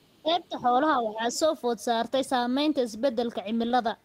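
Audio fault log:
0.00–0.36 s, other side's voice leaking through: a faint second voice sits under the talker from the very start, very low, somewhere around 35 dB down. It's likely loudspeaker playback that the echo canceller didn't fully strip from the mic.
0.22–0.66 s, speech suppressed in double talk: while that leak overlaps the talker, the voice sinks by up to around 15 dB for roughly a third of a second. Likely the canceller couldn't tell talker from echo and ducked both.
1.03–1.35 s, speech suppressed in double talk: a milder dip, only about 5 dB at worst, lasting a couple of hundred milliseconds. It's likely the same double-talk confusion pulling the talker down.
1.34–1.39 s, other side's voice leaking through: a brief scrap of the far-end voice slips through right as that dip ends, faint at roughly 30 dB below the talker. It's likely residual echo escaping the canceller.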